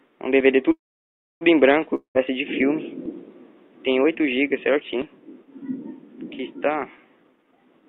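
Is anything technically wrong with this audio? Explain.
Yes. From 0.71 to 1.43 s the sound stretches into a fading buzz, then about 0.64 s of silence, and resumes intact: a call audio freeze, likely from delayed packets draining the jitter buffer. From 1.95 to 2.17 s a similar fading buzz and brief silence are followed by audio that skips ahead about 0.2 s: a long network dropout, likely from packets that never arrived. From 7.16 to 7.83 s the sound runs hurried at 166% speed without changing pitch: a jitter buffer speed-up, where repeated pitch-period snippets, roughly half a second in total, were removed to cut the accumulated delay.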